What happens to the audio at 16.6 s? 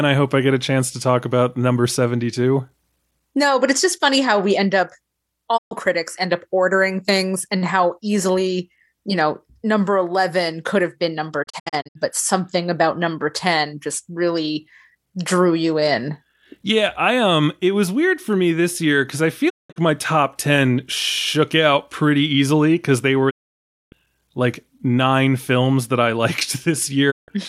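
At 16.6 s the speech carries on without interruption, with no dropout, click, distortion or other fault at that point.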